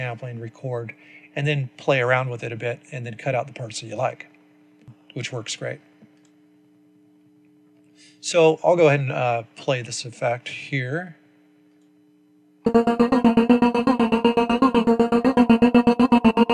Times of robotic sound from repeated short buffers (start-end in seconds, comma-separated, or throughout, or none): none